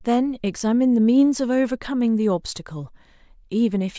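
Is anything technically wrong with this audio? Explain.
No, nothing in this recording stood out as a technical problem on listening.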